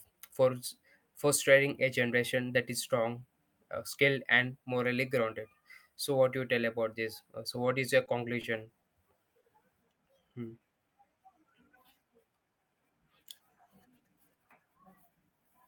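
At 8.05 s the speech hits a short stall from a late packet. The same thing happens again at 8.41, 8.81 and 9.40 s. Each time a packet came in late and the jitter buffer ran dry. The receiver held the last sound until the packet showed up. The holds last 20, 20, 30 and 40 ms. Nothing is lost. A sound simply hangs a little too long, with a faint buzz or dip.

From 10.19 to 11.17 s there is a jitter buffer slow-down. The buffer was low or had just raised its target delay, so the receiver built up a reserve. It did this by repeating single pitch periods, or small bits of pause, over and over. That added 63 ms. The speech plays at 95% speed with the pitch unchanged. Sounds drag slightly, and a mild warble may creep in.

From 13.89 to 14.45 s the opposite happens. This is a jitter buffer speed-up. Too much audio had piled up in the buffer, so the receiver trimmed short pieces of one or a few pitch periods, again and again. 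Roughly 50 ms went missing. The speech runs at about 109% speed, still at the same pitch. That stretch sounds a little hurried.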